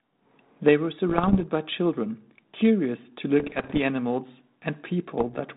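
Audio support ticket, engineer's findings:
Bit errors on an ADPCM link: pops and rough bursts with brief level jumps at 1.09–1.44 s, 3.40–3.79 s, 5.20–5.38 s. Densest and harshest in the middle burst. Flipped bits derail the decoder's step size and predictor, so each error rings on for milliseconds. The 32 kbit/s G.726 path underneath shows only light, band-limited coding texture.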